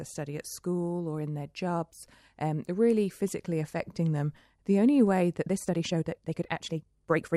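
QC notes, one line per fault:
5.37 to 7.36 s, time-stretched section: speech suddenly runs about 1.49 times faster at unchanged pitch, rushed, likely from software squeezing it by dropping short pieces.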